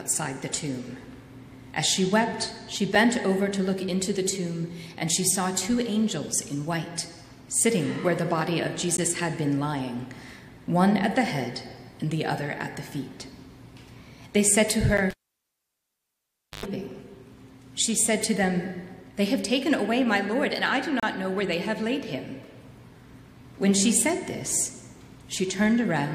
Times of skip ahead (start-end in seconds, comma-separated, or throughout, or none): none